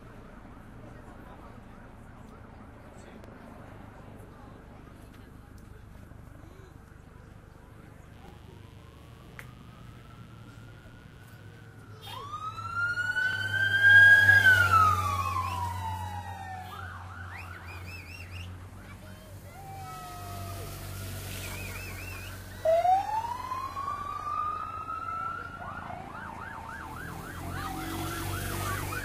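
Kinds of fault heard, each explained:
Overlapping chunks: a brief stutter every 5 seconds, from 3.24 s to 28.46 s, where 44 ms replays because each block starts before the previous one finished.
Mains buzz: a steady raspy buzz from 8.13 to 11.66 s, sitting well below the sound, from switching spikes carrying 60 Hz harmonics up into the kilohertz range.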